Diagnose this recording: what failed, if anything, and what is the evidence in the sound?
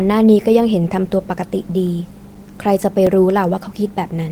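Disc playback failed: on each revolution a scratch destroyed more data than error correction could rebuild, so the player concealed the gap. The result is CD scratch ticks, ten clicks of a few milliseconds each, about five per second, from 1.39 s to 3.55 s.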